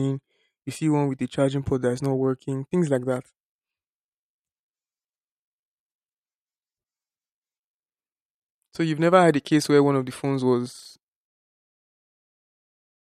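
No technical faults can be heard in the speech. Near the end the level fades out smoothly, starting at about 11 s and finishing at 11.3 s, with no click or hard edge.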